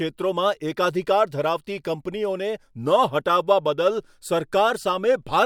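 No technical faults can be heard anywhere in the speech. There is nothing here to place in time order.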